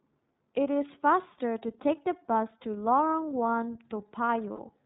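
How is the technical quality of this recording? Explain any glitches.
The recording has clearly audible low-bitrate codec damage throughout and one short dropout near the end.

iLBC codec, throughout: the speech sits inside a narrowband band with nothing above 4 kHz, and it has a slightly rough, synthetic edge. That fits iLBC's 30 ms frame mode at around 13 kbps, which codes each frame's excitation independently.

Lost iLBC frames, 4.53 to 4.60 s: about 60 ms of audio went missing, consistent with two 30 ms packets. The decoder filled the gap by repeating the last pitch cycle blended with noise, so it sounds like a brief held, buzzy vowel before normal speech resumes almost immediately.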